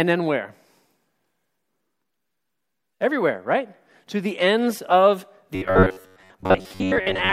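Near the end, from 5.55 s to 7.32 s, new audio was likely arriving too seldom, so the playback side kept filling the gaps by looping its most recent fragment, about 10.7 ms long, while most of the real signal, roughly seven parts in ten, was skipped. That gives robotic sound from repeated short buffers: the looping imposes a fixed buzz near 93.8 Hz, turning the speech into a stiff, metallic drone that only loosely tracks the talking underneath.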